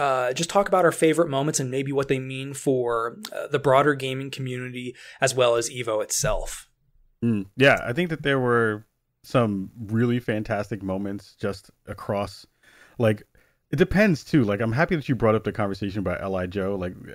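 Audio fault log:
No fault is heard in this speech.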